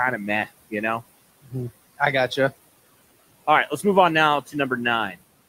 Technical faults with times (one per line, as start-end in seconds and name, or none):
0.00-5.48 noise suppressor artifacts
1.43-1.53 speech cut by the noise suppressor